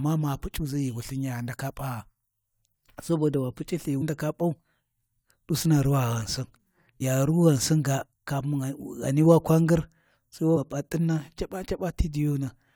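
Damaged data in a compressed stream produces brief glitches in this speech recording at 4.01 s, from 7.00 to 7.02 s, and at 10.55 s. Corrupted bytes in each spot make the decoder misread frames and lose sync, leaving a short chirp or blip.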